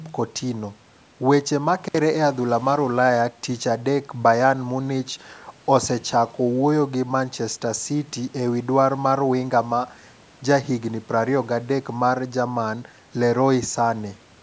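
At 1.84 s the speech drops out abruptly through 1.99 s, an intermittent contact: a loose cable or plug briefly loses connection, opening the line for about 62 ms, with crackle at each edge and faint hiss during the gap. The call microphone processing band-limits the sound to 8 kHz.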